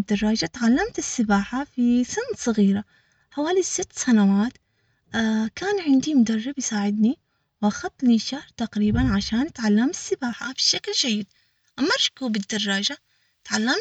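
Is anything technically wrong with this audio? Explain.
Yes. From 10.33 s to the end at 13.80 s, the speech turns thin, bright and hissy, with sibilants that sting and a top end about 11 dB hotter at 10 kHz than at 1 kHz. This is pre-emphasis left on: the treble was lifted before recording or transmission, and the matching de-emphasis that should restore the balance was never applied. The shape of the lift fits a J.17 curve.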